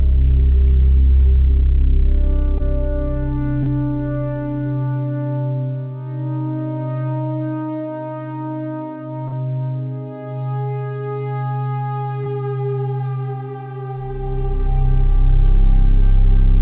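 Brief smears and wobbles break the sound at 2.58–2.61 s, 3.63–3.68 s, 9.28–9.34 s and 12.24–12.28 s, the third longer. Each is short concealed packet loss: about 20 ms of audio, roughly 40 ms at 9.28 s, failed to arrive in time, and the receiver bridged the gap by extending the preceding sound before crossfading back. The narrow band with nothing above 4 kHz fits a G.711 mu-law call path.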